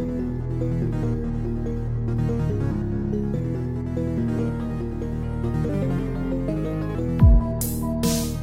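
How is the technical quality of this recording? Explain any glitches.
There is one glitch: a section at the wrong speed from 5.69 to 6.95 s. That stretch plays about 1.27 times too fast, so the sound jumps up roughly four semitones and hurries, then snaps back. The likely cause is a segment resampled or clocked at the wrong rate during editing or playback.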